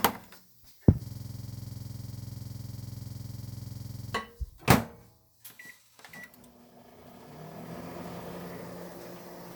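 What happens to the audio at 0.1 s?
Nothing goes wrong at 0.1 s; the audio plays through that moment intact.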